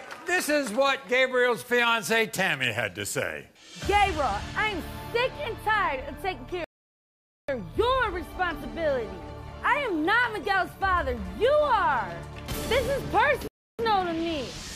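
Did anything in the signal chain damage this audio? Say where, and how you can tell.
Yes, rebuffering stalls at the playback stage. The sound cuts to silence from 6.64 to 7.48 s and from 13.48 to 13.79 s, then resumes exactly where it stopped. The player ran out of downloaded audio, adding 0.84 s and 0.31 s. Waveform and spectrogram show clean, empty gaps.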